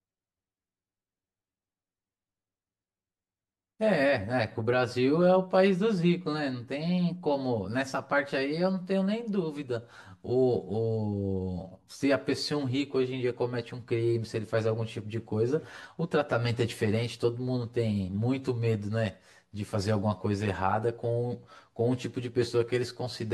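Throughout, the speech sounds hollow and phasey. This is channel delay (comb filtering): one channel lags roughly 10 ms, carving evenly spaced notches from around 50 Hz upward when summed to mono.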